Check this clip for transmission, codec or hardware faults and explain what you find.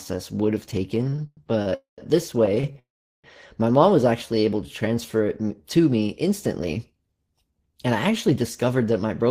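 Four kinds of network timing fault are audible in this speech: repeated stalls, two call audio freezes, a jitter buffer slow-down and a jitter buffer speed-up.

Repeated stalls (stutter) come first, from 0.95 to 1.74 s, right after "would have". There are nine gaps totalling 235 ms, the longest 103 ms. Packets arrived late, so the buffer kept running dry. Each gap was filled by stretching the last sound, so about 30% of that span is filler. A second, lighter stutter follows from 2.46 to 2.78 s. It has four gaps totalling 94 ms, the longest 36 ms. The speech drags and catches.

Two call audio freezes follow. The first runs from 1.75 to 2.01 s and adds 229 ms, of which 130 ms is silent. The second runs from 2.79 to 3.27 s, just before "my mom was", and adds 446 ms, 390 ms of it silent. The likely cause is packets held up in transit. The last sound is carried on and fades out. Then speech resumes where it stopped, later than it should.

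The jitter buffer slow-down runs from 4.26 to 5.68 s, between "my mom was" and "to me instantly". The receiver repeated short pitch cycles to rebuild its reserve. This adds 178 ms and plays at 88% speed. The pitch is unchanged, but the speech sounds drawn out.

The jitter buffer speed-up runs from 7.51 to 9.28 s. Too much audio had built up, so tiny pitch-period slices were cut out, about a tenth of a second in total. Playback runs at 106% speed with the same pitch. The speech sounds slightly hurried.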